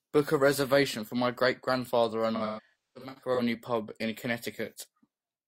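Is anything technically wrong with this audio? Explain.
Yes. AAC frame loss with concealment occurs from 2.35 to 3.41 s, just after "my great grandfather and" and before "pub in". Across that stretch about 683 ms of coded audio was lost in scattered bursts, the longest around a third of a second. The decoder filled each gap by reusing the last good spectrum with randomised detail, so the speech turns smeared and noisy, with a phasey, synthetic texture instead of clear syllables.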